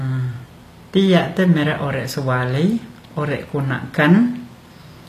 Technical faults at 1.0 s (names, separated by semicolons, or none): HE-AAC compression